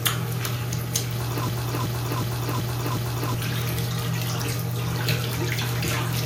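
A system hang loop runs from 1.49 to 3.34 s. The system froze while the hardware replayed one 0.37 s buffer five times, a 2.69 Hz stutter replacing about two seconds of sound.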